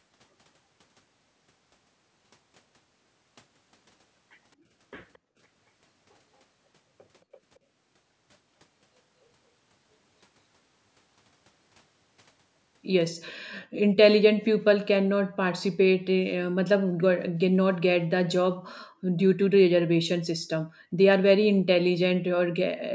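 At 5.13 to 5.18 s, a very faint, delayed copy of the speech surfaces for an instant, about 222 ms late. This is likely an echo leak from a far-end loudspeaker. At 18.9 to 19.07 s, the room sound drops by about 40 dB for a brief moment, then returns. This is background gated by the echo canceller.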